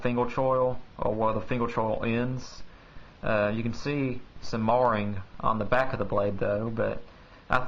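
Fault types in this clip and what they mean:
No faults turn up here at all, nothing to list for this one.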